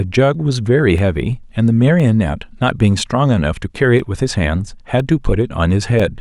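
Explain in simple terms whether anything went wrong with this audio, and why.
Small, regular ticks cut into the speech about once every second, from roughly 0.98 s through to about 6.0 s. Each tick is a tiny gap of about a millisecond where the sound briefly drops to silence. These are periodic USB or driver dropouts: something on the computer interrupts the audio connection at a steady pace, so a sliver of sound goes missing each time, leaving an evenly spaced click.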